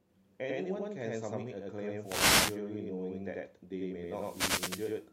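From start to end the speech carries a channel delay (doubling). One channel arrives about 93 ms late, which fits a 4096-sample buffer, and the two are summed to mono. Every syllable is followed by one distinct copy at equal level. Room reverberation would instead give a fading tail, so this reads as a slap doubling.

From 2.02 to 2.50 s, and again from 4.06 to 5.00 s, a wireless microphone noise hit washes over the speech. The radio link fades as reflections cancel, so receiver static rises into a swish. The sound turns to hiss rather than being cut to silence as in a digital dropout.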